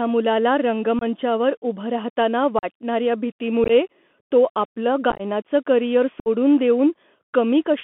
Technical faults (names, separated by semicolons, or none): Bluetooth CVSD headset codec; unconcealed Bluetooth headset packet loss